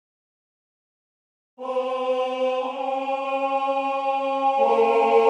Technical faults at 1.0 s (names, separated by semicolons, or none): none